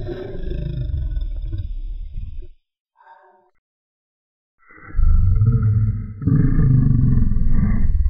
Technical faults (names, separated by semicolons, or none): none